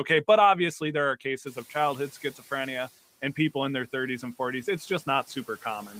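At about 1.5 s the room noise jumps by roughly 23 dB, and the noise suppressor is caught catching up from 1.46 s to 2.9 s. Its noise estimate still reflects the quieter background, so the louder noise passes behind the speech with too little reduction. Over about 1.44 s the estimate adapts and the noise sinks by about 5 dB from its level of around 27 dB below the speech just after the rise.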